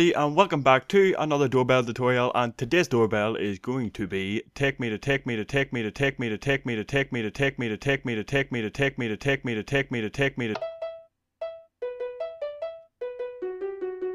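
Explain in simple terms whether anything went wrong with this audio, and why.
A broken-record loop runs from 5.02 to 10.54 seconds. The same short piece of sound, just under half a second long (about 0.47 s), plays 12 times in a row, exactly alike each time, like a stuck record. The likely cause is that the player or stream stalled and kept replaying the last chunk it had in memory. Whatever should have been heard during those five and a half seconds is gone.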